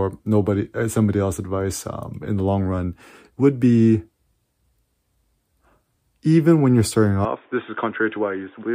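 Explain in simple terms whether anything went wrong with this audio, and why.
Input switched to a poorer device at 7.25 s: the speech suddenly turns dull, quieter and faintly noisy until the end, likely because recording moved to a lower-quality microphone.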